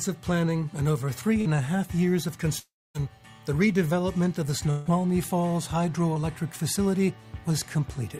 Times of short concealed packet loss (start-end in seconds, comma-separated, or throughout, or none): 1.41-1.47